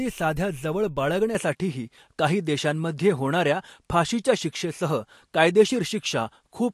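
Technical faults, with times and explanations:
1.35 s to the end, input switched to a poorer device: right after "साध्या जवळ" the sound changes character with no gap. Nothing remains above 11.9 kHz, the level shifts by roughly 5 dB, and a new background noise sits around 55 dB below the speech, likely a change of input device.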